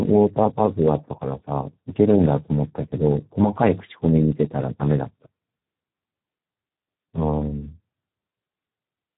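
Speex codec damage throughout: starved excitation makes the speech hoarse and noisy, with nothing above 3.9 kHz, fitting roughly 8 kbps.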